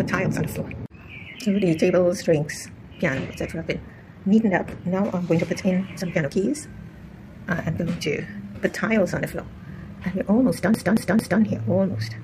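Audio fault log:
10.74 to 11.42 s: CD stuck on one turn. A short slice of sound, about 224 ms long, plays three times in a row. Each jump back brings a brief mute before the slice starts again. The stutter is fast and perfectly even. That regular spacing is the mark of a disc fault. A scratch knocks the laser back one track at the same point on each spin, so the same fragment returns on every turn.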